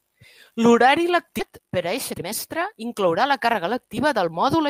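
It's a short speech clip with two problems. Around 1.39 to 1.41 s there's a skip ahead: roughly a second of speech was dropped, probably when a backlog in the jitter buffer was thrown away, and the two sides are butted together with no fill, so the talker seems to leap forward. From 1.50 s to 4.33 s you then get a jitter buffer speed-up. The receiver had more audio queued than it wanted, so it kept snipping out tiny pitch-period-sized slices. Pitch stays put, but the speech runs at about 111% speed and sounds a bit rushed, shedding roughly a third of a second in total.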